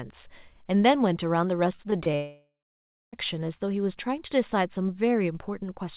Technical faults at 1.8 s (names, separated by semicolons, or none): repeated packet loss (robotic sound)